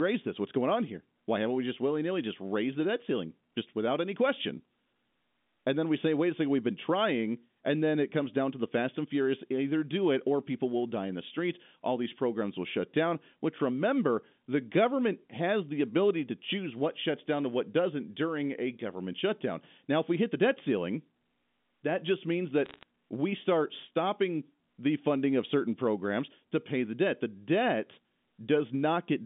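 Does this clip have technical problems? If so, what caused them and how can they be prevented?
Yes. From 22.66 to 22.83 s there is a short burst of bit errors on a digital phone line. The G.711 A-law stream, whose 200 Hz to 3.6 kHz telephone band is audible throughout, had individual bits flipped, and each bad byte decodes to one wrong sample. Where a sign or high-order bit was hit, that sample jumps far from its neighbours and gives a sharp tick. The result is a scatter of crackle laid over unchanged speech, which fits an error rate of a few tenths of a percent. Packet loss would instead cut out or smear whole stretches of sound. Error-checked transmission, or a cleaner line with forward error correction, would prevent it.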